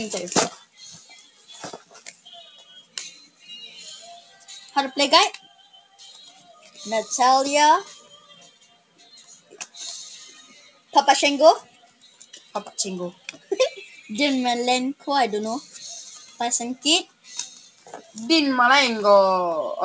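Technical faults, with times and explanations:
Throughout: noise suppressor applied to music or sounds. A speech-tuned suppressor stays active for the whole clip and treats sustained, steady material and decaying tails as background noise, pulling them down while sharp onsets slip through. The gain it applies swings by roughly 15 dB, so the level pumps and the texture thins whenever the sound holds steady. The 8 kHz ceiling above it comes from the call path, which fits a G.722 codec at 64 kbps.
0.57–3.44 s, 4.21–4.48 s, 5.43–6.71 s, 8.02–9.55 s, 10.49–10.93 s, 11.65–12.55 s, 13.13–13.51 s, 17.06–18.16 s: sound cut by the noise suppressor. In each stretch the suppressor decided the held or fading content was noise and dipped it below the surrounding level, by about 7 dB at the shallowest (4.21 s) and about 13 dB at the deepest (0.57 s and 17.06 s). Tails shorten and sustained parts sag audibly, while transients stay largely intact.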